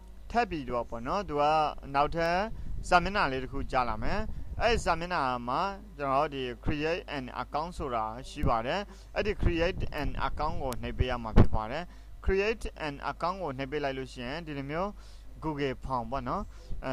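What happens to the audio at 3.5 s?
Nothing goes wrong at 3.5 s; the audio plays through that moment intact, with no dropout, click or distortion.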